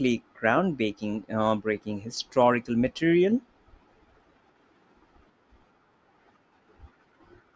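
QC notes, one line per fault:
Nothing stood out on a careful listen to the speech in this clip.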